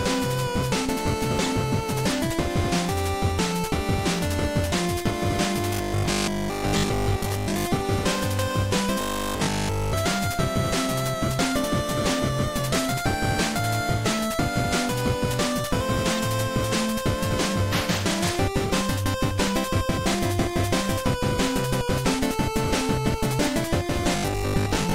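From 5.74 to 7.66 s the sound goes robotic from repeated short buffers, settling into a stiff 50 Hz buzz. That rate fits a roughly 20 ms chunk being looped, likely because new audio arrived too slowly and the gap was filled with repeats. Most of that stretch is repeated material, all of it from 9.01 to 9.93 s, and about half from 24.16 s to the end.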